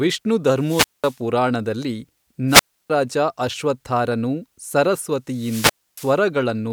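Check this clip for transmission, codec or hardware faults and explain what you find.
Three wireless microphone squelch dropouts interrupt the speech. Wireless microphone squelch dropouts at 0.53 to 1.21 s, 2.47 to 2.90 s (just before "ರಾಜ ಅಶ್ವತ್ಥಾರನು") and 5.28 to 6.23 s occur when the analogue FM link weakens until the receiver's squelch shuts the output. Each begins with rising hiss, then a silent gap of about 200 ms, 310 ms and 280 ms respectively, before the speech returns.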